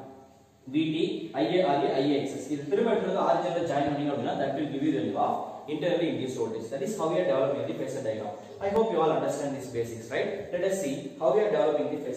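Two tiny underruns with held sample, at 8.76 s and 10.01 s. The output buffer ran dry for about 1.5 ms each time, and a sliver of live audio went missing. The converter froze on its last value, flattening the waveform.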